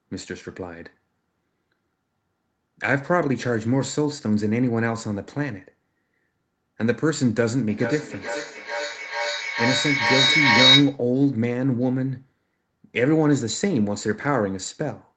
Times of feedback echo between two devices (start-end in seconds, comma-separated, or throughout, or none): 7.69-11.06